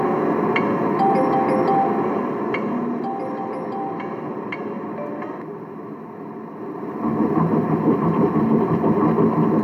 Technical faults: zipper noise

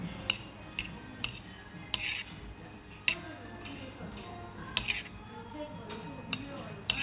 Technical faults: none

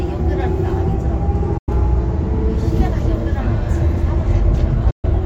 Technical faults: digital broadcast dropout

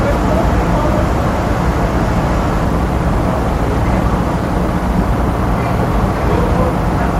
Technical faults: call bitrate drop

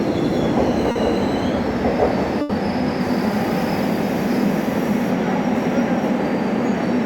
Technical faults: short concealed packet loss; burst of packet loss

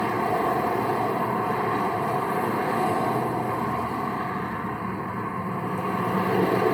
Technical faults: generation loss

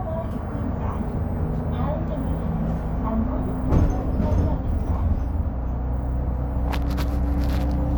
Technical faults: none

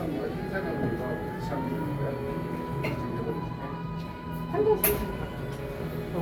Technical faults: none

